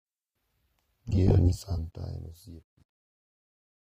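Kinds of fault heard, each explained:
AAC compression: The speech has a dull, smeared quality with a warbling, fizzy texture on sustained sounds and sibilants. Nothing is present above 15 kHz, showing a lowered cut-off. The likely cause is AAC-LC coding at a low rate, which fits a stream of around 32 kbps. At that rate the encoder quantises the spectrum coarsely against its hearing model, leaving holes or noise-filled bands.
Truncation distortion on a fade: From 1.6 s onward the fade turns gritty, and it is worst from 2.4 s to the end. The fade stage is keeping too few bits without dither, which fits a 10-bit path. As the level approaches the smallest step, the waveform collapses into coarse square steps.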